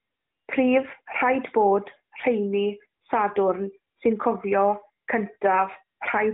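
Nothing goes wrong anywhere in this speech, which comes through a narrowband mobile codec path whose roughly 150 Hz to 3.7 kHz band and light coding character fit AMR-NB at its top 12.2 kbps rate.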